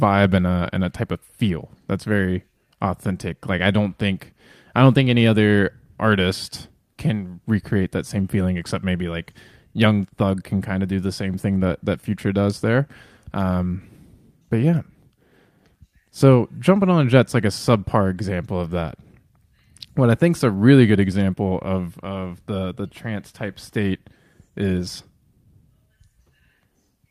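No technical faults can be heard in this speech recording. There is nothing to place on a timeline, since no event in the audio points to a problem in capture, processing or transmission.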